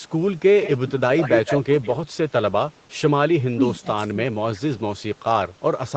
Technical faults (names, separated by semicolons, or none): speech suppressed in double talk